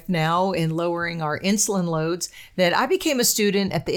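An electrical switching spike at 1.67 s, between "now in lowering our" and "loads that I", cuts into this speech clip as a sharp snap peaking at about -30 dBFS. It is likely a nearby switch, motor or static discharge arcing and coupling into the audio line.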